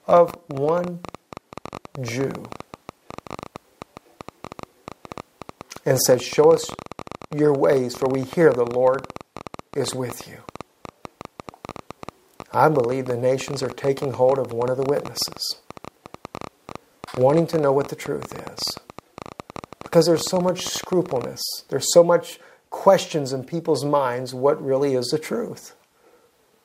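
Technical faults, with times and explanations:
0.09–21.25 s, train of clicks: uneven ticking, nearly 13 per second and a few hundred in all, peaking slightly above the sound; likely interference or a faulty connection or power supply injecting pulses.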